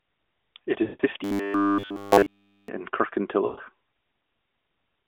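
Lost AMR speech frames at 0.84 to 1.02 s: a 160 ms gap, consistent with about eight 20 ms frames failing their checks. The decoder holds the last pitch and vocal tract settings at falling gain, so the speech smears, fades out, and returns weak and rough.

Robotic sound from repeated short buffers, 1.24 to 2.68 s: essentially all of this stretch is a hard, metallic buzz at 100 Hz, likely from one roughly 10 ms block being replayed while fresh audio arrives too slowly.

Lost AMR speech frames again at 3.46 to 3.60 s: a 120 ms dropout, suggesting about six frames. Concealment drags out and fades the sound, under the narrow 250 Hz to 3.5 kHz band of the AMR narrowband codec, before speech recovers.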